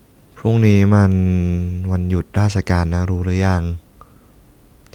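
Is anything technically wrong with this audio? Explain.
No technical faults are audible.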